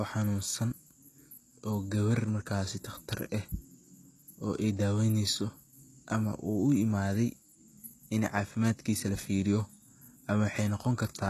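HE-AAC compression runs throughout this speech clip: treble above 12.4 kHz is absent, and the upper band, likely rebuilt by spectral band replication at a low bitrate near 16 kbps, makes s sounds gritty and metallic.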